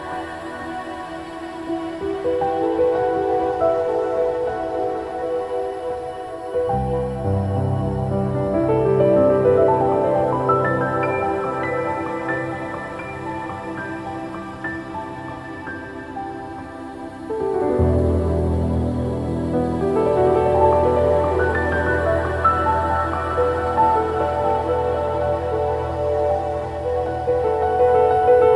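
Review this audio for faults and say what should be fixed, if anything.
Nothing needs to be fixed, since reviewing this audio turns up no faults.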